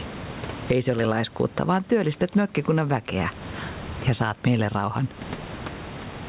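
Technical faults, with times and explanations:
Throughout: gain pumping. The gain swings around 20 dB. Loud and soft parts sit close in level, so the speech sounds squashed. The likely cause is excessive gain, pulled down by a fast limiter.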